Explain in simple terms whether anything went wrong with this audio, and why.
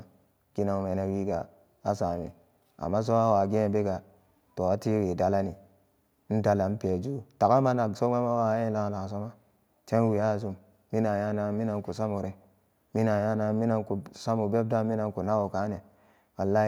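Nothing went wrong with this audio, so there is nothing here that needs explaining.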